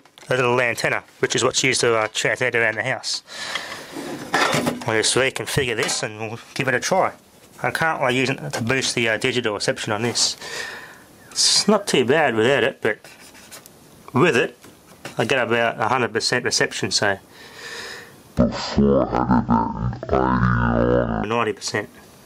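Stereo read as mono, from 18.38 to 21.24 s: here the interleaved left and right samples are taken one after another as if they were a single channel, so each pair of stereo samples becomes two consecutive mono samples. The sound therefore runs at half speed and drops a full octave, 12 semitones, turning slow and heavy. A fainter mirrored copy of the sound also sits in the upper half of the spectrum.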